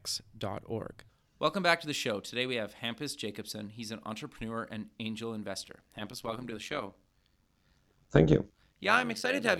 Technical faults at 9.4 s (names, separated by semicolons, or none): overlap-add ripple